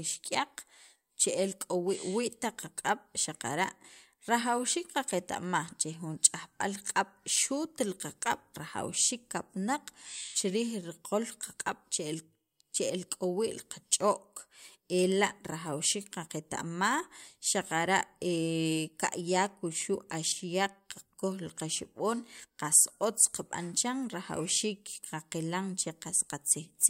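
A speech recording with no technical faults to report. Nothing in the audio points to a problem anywhere in the chain that captured or reproduced it.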